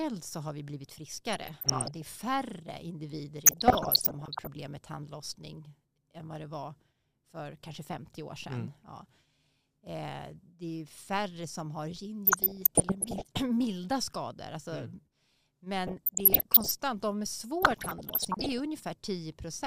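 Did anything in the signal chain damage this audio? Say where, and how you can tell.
Yes. DAB burbling at 1.33–2.02, 3.46–4.47, 12.27–13.25, 15.87–16.71 and 17.62–18.60 s: weak reception let bit errors, under one percent, corrupt MP2 audio samples, causing noise blips in single sub-bands.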